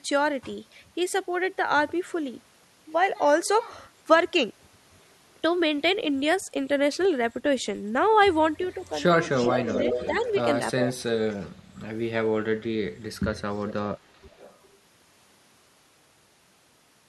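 From 8.6 to 10.29 s, again 10.86 to 11.36 s and faintly 13.35 to 14.66 s, an echo leak repeats the speech about 385 ms late, likely from a loudspeaker echo canceller missing the pickup. It sounds at about -5, -10 and -25 dB, and shows as shifted copies of the harmonic bands. Between 9.54 and 10.24 s, speech suppressed in double talk dips the talker by a few decibels in brief patches totalling roughly 200 ms. The cause is likely the canceller clamping both its own talker and the loudspeaker echo, which shows as waveform notches.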